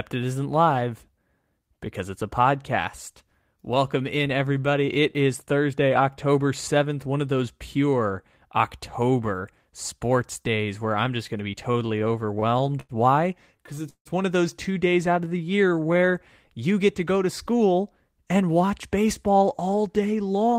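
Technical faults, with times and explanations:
11.63 to 12.92 s, repeated stalls (stutter): across this stretch the audio halts fourteen separate times, with the gaps adding up to about 219 ms, or 17 percent of the span, and the longest lasting 90 ms. Packets were arriving later than playback needed them, so the jitter buffer kept running dry and the receiver stretched the last sound until new data came in. Nothing is lost, but the speech drags and catches repeatedly.
13.57 to 14.08 s, repeated stalls (stutter): a second bout of four stalls filling 194 ms, 38 percent of this short span, with one gap reaching 160 ms. A hold that long is bridged by continuing the previous sound and fading it, so the flow audibly stops and restarts. Again no audio is missing; the effect is a halting, uneven delivery caused by the buffer emptying while packets were late.
15.15 to 16.13 s, jitter buffer slow-down: playback runs at about 88 percent speed, with 126 ms of extra audio inserted over roughly a second. 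The buffer was low, so the receiver built up a reserve by repeating individual pitch periods and bits of pauses many times in succession. Pitch stays the same while the speech sounds drawn out and slightly laboured.
18.20 to 20.58 s, jitter buffer speed-up: for the final stretch the audio runs at about 108 percent speed, with around 200 ms removed. The buffer had accumulated more than its target delay, likely after delayed packets arrived together, so the receiver trimmed short segments of one or a few pitch periods over and over to bring latency down. Pitch is unchanged, but the speech sounds hurried.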